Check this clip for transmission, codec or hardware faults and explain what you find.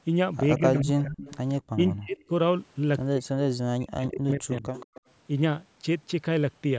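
Two faults are audible in this speech: speech suppressed in double talk, and echo leak.

Speech suppressed in double talk occurs at 0.58–1.25 s, 1.75–2.32 s, 3.14–3.35 s and 3.74–4.69 s. The voice ducks by about 25 dB in the first two stretches and about 40 dB in the later two. When both sides talked at once, the echo canceller likely could not separate this talker from loudspeaker echo and turned everything down. These are gain dips tied to overlapping talk, not the hard, clicky gaps of packet loss.

Echo leak appears at 0.76–0.82 s, 1.2–1.55 s and 4.74–5.01 s. A faint copy of the voice, about 20 dB down, trails 174 ms behind. This is likely the far end's loudspeaker sound reaching its microphone and slipping past cancellation. A single distinct delayed repeat separates it from room reverberation, which smears continuously. The call's microphone processing limits the audio to below 8 kHz.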